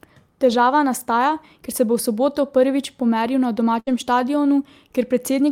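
At about 3.79 s there's a burst of packet loss running to 3.89 s. The receiver fills the hole by stretching the last bit of speech and fading it over roughly 72 ms, then jumps back in with about 80 ms of speech simply gone.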